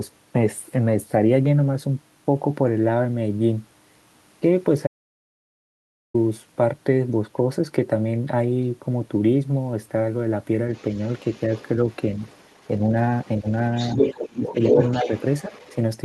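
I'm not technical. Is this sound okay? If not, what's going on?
No. At 4.87 s there is an audio dropout to silence. The speech cuts off and returns at 6.14 s. That gap is dead quiet, with no background at all. The likely cause is a lost connection, so that 1.3 seconds is gone.

Next comes the other side's voice leaking through. From 10.73 to 12.68 s a second voice sits faintly underneath. From 13.19 to 15.75 s it is about as loud as the main speaker. This is likely the far-end voice from a loudspeaker, not fully removed.

While both voices overlap, the speech is suppressed in double talk. The main voice ducks briefly at 13.41 to 13.47 s and at 15.48 to 15.52 s. It drops more deeply from 14.32 to 15.10 s. Likely, the echo removal turned the speaker down along with the echo.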